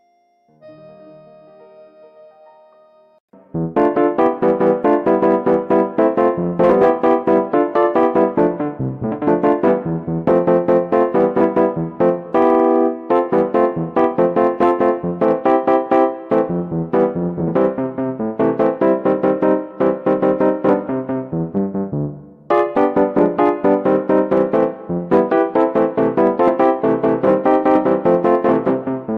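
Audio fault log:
No faults are audible in the signal, and nothing in the audio calls for an entry in this log.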